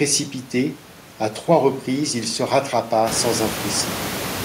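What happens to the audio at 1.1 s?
Nothing goes wrong at 1.1 s; the speech there is intact, with no dropout, click or distortion.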